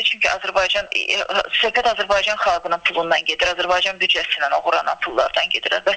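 No technical faults are audible anywhere in this recording.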